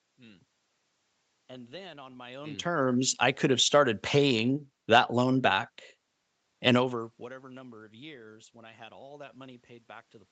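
Speech, carried over a call path with the band topping out at 8 kHz and some room noise underneath, with level shifts around 2 s and again near 6.5 s as the talker's distance to the microphone changes; nothing technically wrong.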